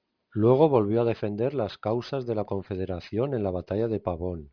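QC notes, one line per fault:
Throughout, aliasing: the speech was brought down from 44.1 kHz to 11 kHz with no anti-alias filter in front, so everything above the new 5.5 kHz limit folds back down into the band as unrelated tones. You hear it mostly on sibilants, which come out gritty and metallic rather than just dull. The folded junk sits roughly 30 dB under the speech, and the spectrum runs hard right up to 5.5 kHz instead of rolling off.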